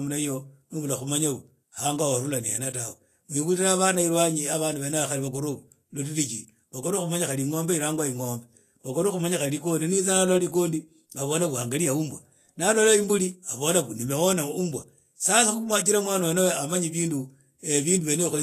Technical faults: Vorbis compression

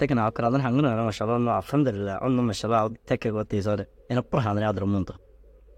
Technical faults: clock slip clicks

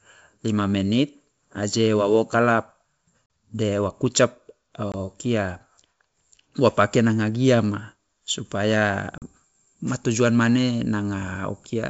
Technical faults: packet loss on an ADPCM call

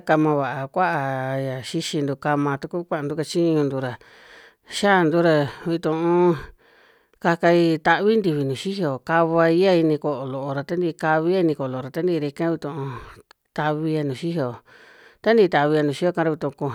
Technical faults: none

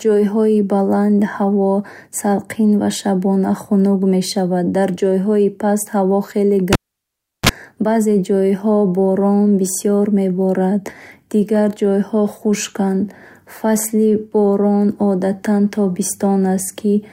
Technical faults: cable pulled and plugged in

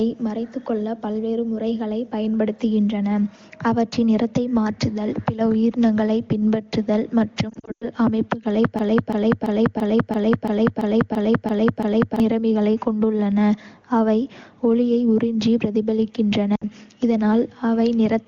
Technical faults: lost AMR speech frames; broken-record loop

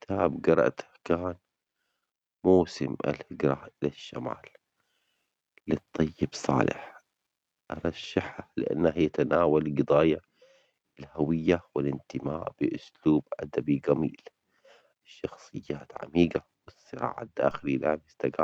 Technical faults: DC step

